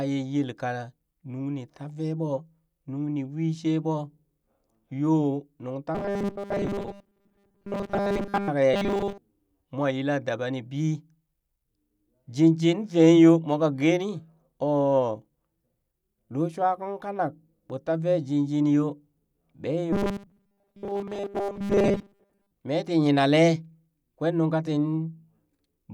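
From 5.95 to 8.48 s, 8.74 to 9.18 s (just before "mwa yila daba ni") and 19.93 to 22.51 s, the speech turns into a rigid, metallic 200 Hz buzz. That's robotic sound from repeated short buffers, likely a 5 ms chunk replayed in place of most of the real audio.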